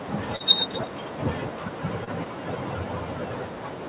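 A short speech recording that has come through a narrowband call path; nothing above 4 kHz is consistent with G.711 at 64 kbps. Throughout, there are noise suppressor artifacts: the suppressor keeps clamping bands it judges to be steady background, so the residual room noise, about 19 dB under the speech, ducks in the gaps and swells under the talking. The same processing also causes speech cut by the noise suppressor across the whole clip, from 0.0 to 3.9 s. Softer consonants and tails get pulled down along with the noise, by about 13 dB at worst, so some endings come across faint or swallowed. On top of that there are two short concealed packet losses, at 0.36–0.42 s and 2.04–2.09 s. The first hole is about 40 ms and the second about 20 ms. The decoder papers over each by extending the preceding sound before crossfading back, so each one is heard as a brief smear or wobble.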